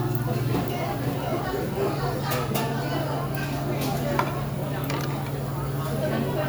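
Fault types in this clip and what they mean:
Doubled audio track: likely a second, slower capture path or an out-of-step edit feeding the same sounds in twice, so from 0.53 to 2.21 s a dry, full-band copy trails about half a second behind, roughly 5 dB quieter, cutting in and out abruptly.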